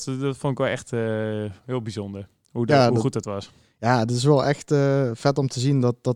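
No technical faults are audible.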